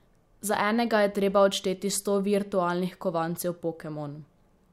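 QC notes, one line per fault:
No faults found in the speech. Nothing here needs a fix or a flag.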